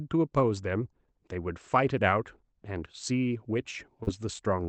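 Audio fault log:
4.03 to 4.10 s, short concealed packet loss: roughly 40 ms of the call arrived too late for the decoder, so the receiver papered over about 35 ms of it by carrying the last bit of speech forward and then blending back into the real signal. That's why you hear a brief smear or wobble there.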